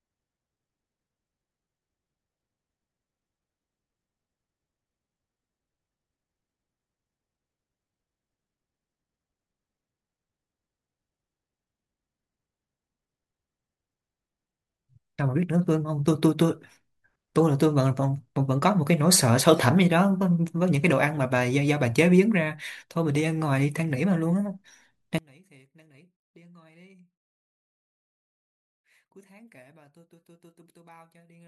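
A speech recording. From 25.18 s to the end, the centred speech drops sharply, by about 32 dB when heard in mono, leaving only a faint residue. The likely cause is one channel inverted, so identical content in both channels cancels when summed.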